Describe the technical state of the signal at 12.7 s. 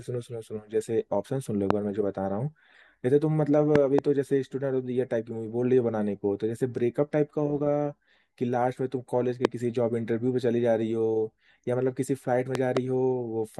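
At 12.7 s the signal sits inside a loud pop event running from 12.55 to 12.79 s: two sharp transients in quick succession, peaking at roughly 20 dB above the speech, which continues underneath without interruption. The likely cause is a sudden voltage step or pulse entering the chain, such as a connector, switch, static discharge or driver glitch, which the downstream circuitry then shapes into these brief thump-like pulses.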